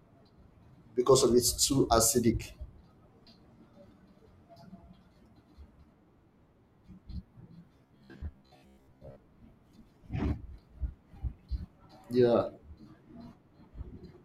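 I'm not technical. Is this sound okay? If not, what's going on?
No. From 7.78 to 9.19 s the speech turns into a flat, metallic, robotic buzz, a steady low hum that still loosely follows the talking. This is robotic sound from repeated short buffers: audio likely arrived too slowly, so tiny 15 ms snippets were replayed, repeating about half the time.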